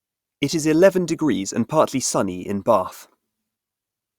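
Nothing in this recording trips up the ear, and no technical fault turns up anywhere along it.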